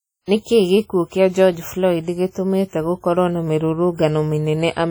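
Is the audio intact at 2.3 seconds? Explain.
No. From 2.30 to 2.35 s, just before "gũkorwo na", there is pre-echo: a short hiss of about 47 ms leads into the attack, which arrives softened and smeared. The transform codec spreads its quantisation noise evenly across a whole block, so noise sized for the loud onset also fills the quiet gap before it. Unlike reverb or a delay echo, this smear comes before the sound rather than after it, and it is noise, not a copy of the attack.

The clip also carries heavy transform-codec damage, likely from WMA compression at a bitrate that fits about 32 kbps. The speech sounds ringing and washy, with a hiss that swells and falls with the level. At this rate the encoder drops weak spectral lines, and its long blocks let the noise smear over tens of milliseconds, which is why the pre-echo here runs so long. Unlike steady background hiss, this noise rises and falls with the speech itself.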